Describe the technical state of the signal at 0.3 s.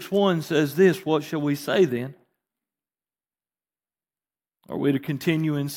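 At 0.3 s the speech signal is intact, with no dropout, distortion, glitch or other fault audible at that point.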